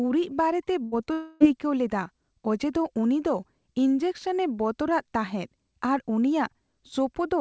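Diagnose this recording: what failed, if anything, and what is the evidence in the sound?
At 0.84 to 0.94 s, a held, fading smear replaces the speech: a burst of packet loss in the network, concealed by stretching the last sound.

A brief smear at 1.06 to 1.09 s is short concealed packet loss on the network path, with about 10 ms rebuilt from the preceding audio.

From 1.13 to 1.42 s, the speech gives way to a long, fading fill, likely a long network dropout, with about 280 ms lost and concealed.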